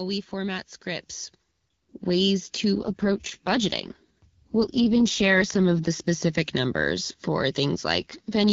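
From 2.76 to 5.88 s and again from 7.93 s to the end, an AMR rate drop makes the speech rough and synthetic, consistent with 12.65 falling to 6.6 kbit/s. The spectrogram keeps the same bandwidth with no gap in the waveform, only coarser, smeared harmonics.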